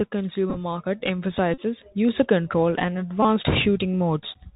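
The link between headset and phone runs through the Bluetooth CVSD headset codec for the whole clip. Its one-bit up-or-down coding, consistent with a 64 kbps stream, cuts everything above 4 kHz and cannot follow fast, loud high content. The speech is therefore dull and narrowband, s sounds turn scratchy, brighter loud passages distort as the step size falls behind, and a granular hiss sits beneath the talking throughout.

Bluetooth headset packet repeated occurs three times. In each, voice packets were lost on the wireless hop and the chip decoded the previous packet's bits again in their place. From 0.50 to 0.57 s about 30 ms went missing, scattered across roughly 68 ms in short bursts, the longest around 10 ms. That gives brief, broken stretches of buzz. From 1.54 to 1.60 s a denser run of about 37.5 ms, which fits ten packets, repeats at every 3.75 ms frame and produces a steady buzz near 267 Hz until clean packets return. 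From 3.23 to 3.25 s a shorter loss of about 22.5 ms gives a quick burst of the same buzz.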